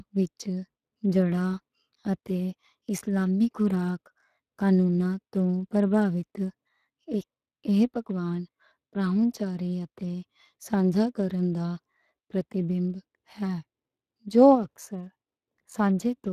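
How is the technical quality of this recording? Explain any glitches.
The speech carries plainly audible Speex codec damage from start to finish. The voice sounds coarse and processed, and the top of the spectrum stops at about 15.3 kHz. Speex is a CELP codec. It models each short stretch of speech as a filter driven by a coded excitation signal, and at this rate it cannot carry that excitation finely enough to sound natural. The level of degradation points to a bitrate around 22 kbps.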